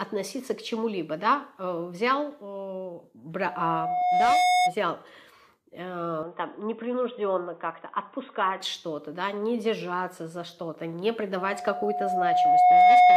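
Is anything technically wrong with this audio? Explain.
Yes. There are two kinds of fault.

Loudspeaker feedback squeal appears from 3.41 to 4.74 s and again from 11.37 s to the end of the clip at 13.16 s. A microphone is picking up the loudspeaker it drives, and at 723 Hz the loop gain rises above one, so that tone feeds on itself. It swells over about a second in the first event and about one and a half in the second, peaking at about 10 dB and then about 15 dB above the programme.

From 6.23 to 8.61 s the sound turns dull and band-limited, with nothing above 3.8 kHz and a faint new noise floor about 45 dB below the signal. The change happens with no gap and no noticeable level shift, and the sound clears again at 8.61 s. This is likely an input switched to a poorer device, such as a headset's narrowband call profile, whose bandwidth and noise replaced the original microphone's.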